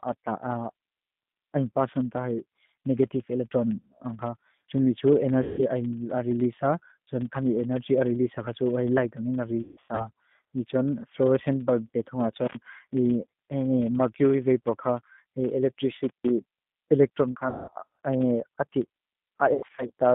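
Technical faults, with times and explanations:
Throughout: filter restarted on every block. A buzz at about 23.4 Hz runs under the sound and rises and falls with its level. A filter is dropping its memory and starting each block from silence, so every block opens with a small transient. The repeat rate fits a 2048-sample buffer. On the waveform, small regular steps mark each block edge; on a spectrogram, thin vertical lines repeat every 43 ms or so, stronger where the speech is loud.
Throughout: G.729 codec. The speech is intelligible but plainly rough and synthetic. The signal is rebuilt from a vocal tract model, a pitch predictor and a few pulses per frame, which fits an 8 kbit/s codec of this family. The line passes only about 150 Hz to 3.6 kHz. On a spectrogram, energy stops hard at 3.6 kHz with nothing above, and harmonics look smeared and blocky frame by frame.
5.43–5.62 s, 9.62–10.10 s, 17.32–17.71 s and 19.54–19.91 s: VoIP packet loss concealed by the speech codec. 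At 5.43 s a single 150 ms gap is filled. The later three are scattered losses over about 360 ms each, totalling 270, 240 and 180 ms, with longest runs of 150, 180 and 90 ms. The decoder repeats its last pitch and filter while lowering the gain, so the speech stretches into a fading buzzy tone and stays weak for a while after packets return. On a spectrogram, flat, frozen harmonic bands fade out instead of moving with the speech.
16.04–16.31 s: intermittent contact. The sound cuts out for about 0.15 s, with crackle at both edges, as a loose plug or cable briefly opens the line. Only faint hiss remains while the contact is broken. On the waveform, the signal drops to near zero with sharp spikes at the break and the reconnect. On a spectrogram, a blank gap shows broadband vertical clicks on either side.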